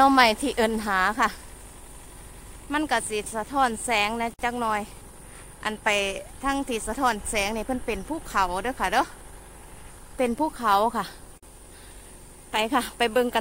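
At 4.34 s there's a gap at a join of encoded pieces, about 52 ms long, and another at 11.38 s lasting about 49 ms. Both have the same cause. The audio was encoded in separate chunks and stuck back together untrimmed, so each join keeps the encoder's start-up silence plus the padded final frame. You hear a brief hole in otherwise continuous sound, edges softened by the codec, and then it picks up right where it left off.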